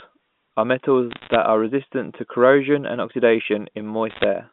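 Bit errors on a digital phone line struck from 1.11 to 1.35 s and again from 4.10 to 4.24 s. Flipped bits each corrupt a single sample in the A-law stream, and a flip in the sign or a high-order bit throws that sample far off, giving a sharp tick. Several of them close together make a short burst of crackle over unchanged speech. The second burst is denser, with roughly twice the error rate, around one to two percent, over speech band-limited to about 150 Hz to 3.5 kHz.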